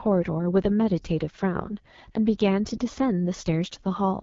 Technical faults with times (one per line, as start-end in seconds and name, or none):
0.00-4.22 AMR wideband (HD Voice) codec